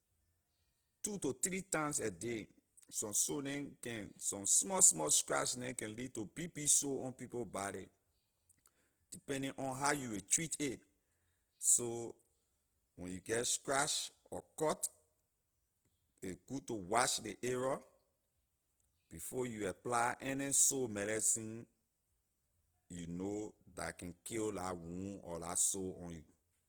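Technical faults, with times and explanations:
Throughout, Opus compression. The speech sounds grainy and rough, with a noisy texture laid over it. The damage is plainly audible. The bandwidth stays wide, with content reaching up to 20.2 kHz, so nothing sounds muffled. The likely cause is Opus in its music mode at a low rate, which fits 16 kbps. Short of bits, it keeps each band's energy but fills in the fine detail with folded or noise-like content.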